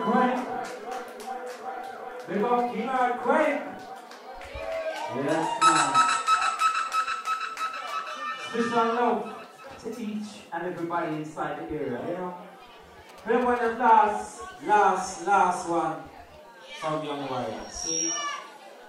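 The audio has two brief faults. From 11.98 to 12.05 s there is a garbled flutter. This is frames out of order. Two neighbouring 23.2 ms blocks were decoded in swapped order. The stretch plays with its halves exchanged, but no time is lost. From 13.09 to 13.90 s a galloping dit-dit-dit of short buzzes appears, pulsing near 217 Hz and sitting well below the main sound. These are GSM signalling bursts. A nearby 2G phone transmitted short groups of radio bursts while signalling, and the audio circuit rectified them into audible interference.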